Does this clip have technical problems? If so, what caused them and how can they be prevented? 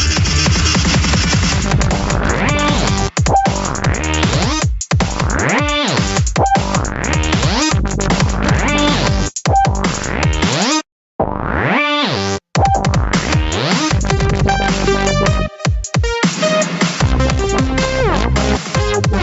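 Yes. Throughout the clip there is gain pumping, with the level swinging by around 10 dB. Loud and quiet passages sit unnaturally close together, so the sound feels squashed and breathing. The likely cause is microphone gain set far too high, with a fast limiter or automatic gain stage clamping down on each peak and releasing in the pauses. The audio stops at 8 kHz, which is normal for a call codec path and not a fault. To prevent the pumping, lower the microphone input gain so peaks stay well below the limiter threshold.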